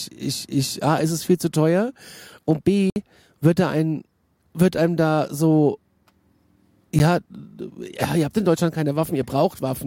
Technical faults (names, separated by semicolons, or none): block of digital silence